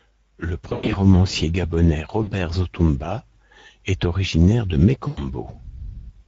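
Throughout the clip, the Speex codec's damage is plainly audible: the speech has a hoarse, noisy grain, which fits a mid-rate Speex mode of roughly 17 kbps. With too few bits for the excitation, the harmonics look smeared and grainy on a spectrogram, and the band above 4 kHz appears as a diffuse noise-like fill rather than crisp consonant detail.

From 0.69 to 0.97 s, VoIP packet loss concealed by the speech codec takes out about 160 ms of sound, scattered over 240 ms with a longest gap of 100 ms. The decoder stretches its last pitch and filter into a sound that fades away. A spectrogram shows the last sound held and smeared, and the waveform envelope decays. The same concealment returns briefly at 2.23–2.32 s, covering about 40 ms. It appears again at 5.07–5.24 s, just after "est originaire de", covering about 100 ms. Each time, the speech stays weakened for a short while as the decoder recovers.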